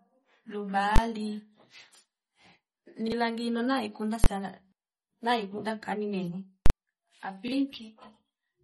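Across the whole speech clip, the sound is thin and watery, with nothing above 11.9 kHz and plainly audible swirling artefacts. This is likely MP3 compression at a low bitrate, around 32 kbps. Short of bits, the encoder cut the treble and dropped weak frequency detail.

From 0.96 to 0.98 s there is a very loud bang. This is invalid numbers at full scale. A calculation failed, and a 20 ms block was pinned to the maximum level. The same bang recurs at 4.24 to 4.26 s and at 6.66 to 6.70 s, where the block lasts 40 ms.

From 3.08 to 3.12 s a brief stutter is heard. This is a repeated buffer. Fresh audio arrived late, so a 40 ms piece played twice with a hard join, and about 40 ms of sound was lost. It happens again at 7.48 to 7.52 s.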